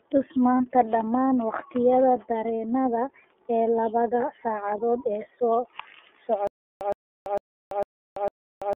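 The whole recording passes through the iLBC codec. Sound is confined to roughly 250 Hz to 3.4 kHz, which points to a telephone line, and the 30 ms framing fits the 13.33 kbps mode. The result is a plainly rough, slightly synthetic texture. Unlike a wideband codec at low rate, nothing above 4 kHz survives at all.

From 0.57 to 0.60 s a single lost iLBC frame of 30 ms is concealed. The decoder repeats the last pitch cycle with some noise, giving a brief buzzy held-vowel smear. Because each frame decodes independently, the sound recovers immediately rather than staying damaged for several frames afterward.

From 6.47 s to the end there is a stutter with silent gaps. The same 115 ms fragment replays five times, each followed by about 337 ms of digital silence, a steady 452 ms cycle. The likely cause is a stalled stream retrying from its last buffer. Unlike frame-loss concealment, nothing new is synthesised, the gaps are dead silent, and the intended audio is simply lost.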